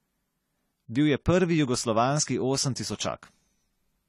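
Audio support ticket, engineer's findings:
AAC compression throughout the speech. Likely a low-bitrate AAC-LC encode, which fits about 32 kbps. Lines quantised against a hearing model lose spectral detail, plainly audible as codec damage. Encoder lowered its cut-off, so nothing above 13.9 kHz.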